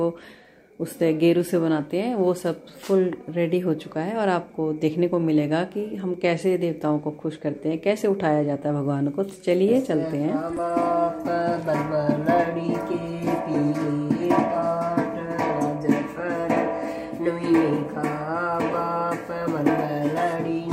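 No technical faults can be heard anywhere in this recording.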